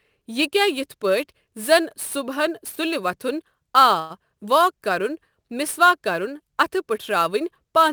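Sample clock jitter runs through the whole clip. The converter's timing wanders by a few microseconds, so each sample lands slightly off its instant. The error grows where the speech waveform changes fastest, giving a hiss, roughly 25 dB below the signal, on loud and bright sounds.

A call audio freeze occurs from 3.99 to 4.12 s, right after "وَتھُن آ". The receiver likely ran out of buffered packets and stretched the last sound into a short buzz or hiss fill of about 0.11 s. Speech then resumes at "واک کرُن" with nothing lost, just delayed by that gap.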